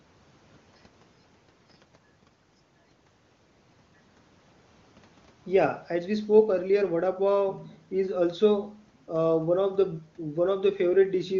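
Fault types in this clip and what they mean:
No faults detected; the speech comes through the AMR wideband (HD Voice) path with at most faint coding traces, which fits its top rate of 23.85 kbit/s.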